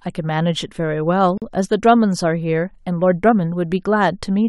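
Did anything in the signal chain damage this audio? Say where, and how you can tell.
Yes: a 42 ms silence cuts into the speech at 1.38 to 1.42 s, then resumes; a gap at a join of encoded pieces, from untrimmed encoder delay and padding.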